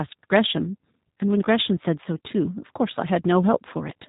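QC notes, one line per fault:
Throughout, G.729 codec: the speech has a hard ceiling at 4 kHz. On a spectrogram, every frame stops sharply there with nothing above. Below it, harmonics look smeared and slightly jittery. The sound is rebuilt from a vocal tract filter, a pitch predictor and a few sparse pulses per 5 ms subframe, which fits an 8 kbit/s G.729A stream. The plainly audible rough, buzzy, synthetic edge shows in the waveform as smoothed, simplified cycles.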